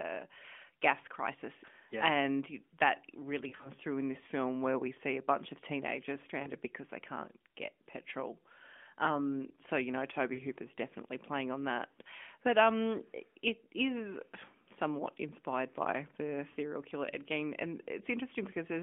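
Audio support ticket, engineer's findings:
Lost AMR speech frames at 3.48–3.70 s (scattered, about 100 ms missing), 6.42–6.50 s, 10.34–10.42 s and 16.50–16.57 s. Brief warble that drags and dims, then a weak restart. Radio errors corrupted frames, so the decoder repeated the last good pitch and filter settings at falling gain. On a spectrogram, harmonics freeze and fade within a band topping out near 3.4 kHz, as expected from the AMR narrowband mobile codec. On the waveform, the envelope sags.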